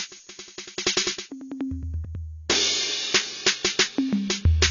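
From start to finish the music sounds dull and smeared. Nothing sits above about 6.9 kHz, so the top octaves are simply gone. Sustained tones carry a warbling, fizzy texture, and the damage is plainly audible. This is likely AAC compression. The encoder has spent too few bits, which fits a low rate near 24 kbps. It lowered its cut-off and quantised coarsely.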